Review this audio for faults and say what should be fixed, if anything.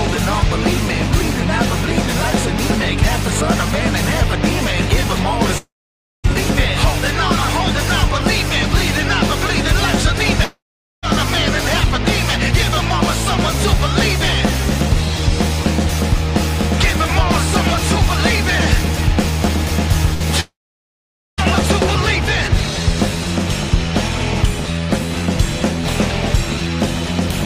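Three gaps, at 5.58 to 6.26 s, 10.44 to 11.05 s and 20.40 to 21.40 s, are likely long network dropouts. Each briefly carries on the last sound as a fading buzz or hiss, then falls to silence for about 0.55 s, 0.45 s and 0.86 s, and the sound resumes with 0.6 to 1 s lost. Unlike a burst, the concealment gives out into silence. Larger jitter buffering and redundancy on the link would prevent them.

A burst of packet loss at 20.14 to 20.22 s removes about 60 ms, bridged by a short held, fading continuation of the preceding sound that never reaches silence before playback resumes. Its brevity and unbroken fill distinguish it from the dropouts. Forward error correction would cover losses this short.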